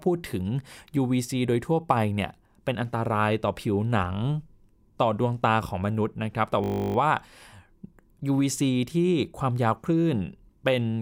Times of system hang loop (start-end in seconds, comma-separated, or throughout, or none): 6.64-6.96